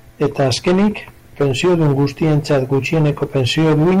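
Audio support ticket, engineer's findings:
Harsh fuzz on all loud speech, entire clip. Hard clipping: about 12 dB overdrive at a gain stage or converter, roughly 15% of samples flattened.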